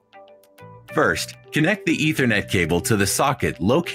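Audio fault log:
throughout: noise suppressor applied to music or sounds. A speech-tuned suppressor stays engaged, treating steady content as noise, so the level swings by around 10 dB and the sound pumps.
0.00–0.91 s, 1.34–1.51 s: sound cut by the noise suppressor. The suppressor clamps down on held or fading material, dropping it by about 18 dB first, then about 9 dB, so tails shrink.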